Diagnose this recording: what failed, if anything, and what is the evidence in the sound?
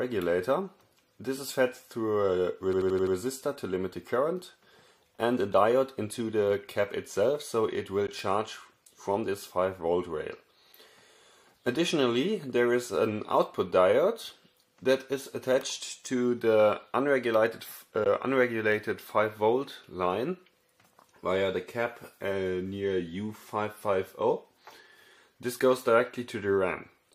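At the driver or buffer stage, a system hang loop runs from 2.73 to 3.16 s. One 85 ms slice of sound repeats five times at about 11.7 Hz, giving a machine-gun stutter rather than a buzz. The length fits a 4096-sample ring buffer that the hardware kept cycling while the driver stalled. Playback then picks up with essentially nothing skipped. On a spectrogram the same pattern tiles in identical vertical blocks, and the waveform shows exact copies separated by hard seams.

In the playback path there are two brief holes, at 8.07 s and 18.04 s. Each is about 13 ms of silence, and the sound resumes further along as though it had kept playing underneath. The likely cause is a Bluetooth dropout, each hole matching one audio packet that arrived too late and was discarded. The waveform shows a flat gap cut cleanly out of the signal, and the spectrogram shows a thin blank vertical stripe across all frequencies at each time.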